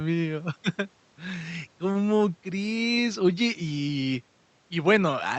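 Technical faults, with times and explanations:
No technical faults found; the speech has come through a call codec path, and its top end stopping near 8 kHz is what that path normally does.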